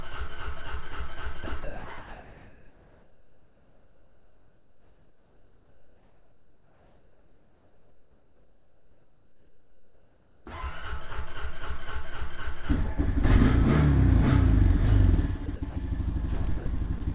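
At 1.44 to 1.46 s and 1.64 to 1.84 s the sound drops out and is replaced by steady noise. This is sound dropped by the voice detector: the sender's detector likely judged this material to be background and stopped transmitting, so the receiver substituted generated noise until the detector triggered again.

From 1.98 to 10.46 s the real background gives way to comfort noise. Its detail is replaced by a flat, featureless hiss about 3 dB different in level. During this stretch the sender has likely halted transmission, and the receiver synthesises noise roughly matched to the background's spectrum.

The voice-detector dropouts recur at 15.46 to 15.48 s, 15.56 to 15.62 s, 15.70 to 15.76 s and 16.58 to 16.66 s. Each one is a gap of 20 to 80 ms filled with the same steady noise.

At 16.98 to 17.02 s, a short concealed packet loss leaves a 20 ms hole. The receiver extrapolated from the preceding sound and blended back, which produces a brief smear. 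Throughout the clip, nothing is heard above 4 kHz, consistent with a G.711 narrowband call path.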